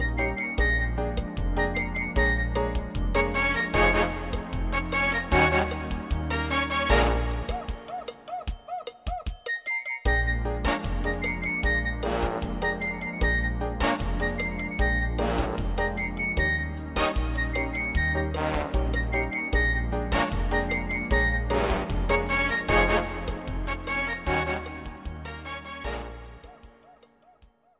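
Nothing is technically wrong with this audio, so there are no times or causes to report.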